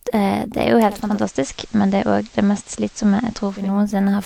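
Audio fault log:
0.89–3.82 s, digital radio blending to analogue: just after "er jo" the speech cross-fades over roughly a third of a second (361 ms) into the FM broadcast of the same station, then fades back. The FM path adds steady hiss about 30 dB below the speech, with no level change. Unlike a codec bitrate drop, the FM hiss arrives through smooth fades rather than an abrupt switch.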